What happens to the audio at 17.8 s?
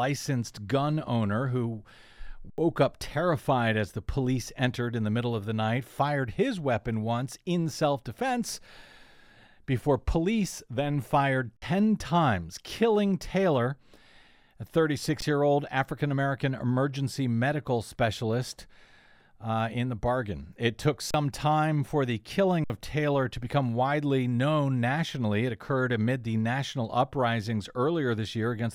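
Nothing goes wrong at 17.8 s; the audio runs through that moment intact, with no dropout, click or other fault to be heard.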